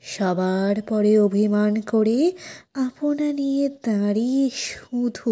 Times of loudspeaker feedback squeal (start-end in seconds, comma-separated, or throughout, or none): none